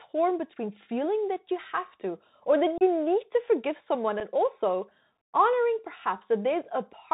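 Throughout, the speech carries Bluetooth CVSD headset codec damage, which fits a 64 kbps CVSD link. The one-bit slope tracking caps the band near 4 kHz, leaves a granular hiss underneath, and smears loud, bright passages and s sounds into scratchy distortion.

Unconcealed Bluetooth headset packet loss opens abrupt holes with no concealment. Between "have to or that" and "need to forgive someone", about 30 ms drops out at 2.78–2.83 s, a few packets' worth. At 4.2 s, after "need to forgive someone" and before "also honoring", a 7.5 ms gap, likely a single lost packet, leaves a brief abrupt-edged break.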